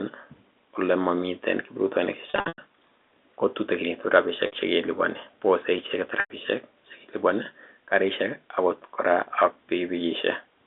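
Packet loss with pitch repetition breaks the speech three times. From 2.3 to 2.58 s, about 220 ms goes missing in scattered gaps, the longest 100 ms, fitting 20 ms packets. After "ko tutekinitu", 4.46 to 4.52 s loses 60 ms, and 6.2 to 6.3 s loses 100 ms. Each gap is filled by repeating the last pitch period, giving a held, buzzy tone that fades. A spectrogram shows flat, frozen harmonic stripes, and the waveform shows identical repeating cycles with a decaying envelope.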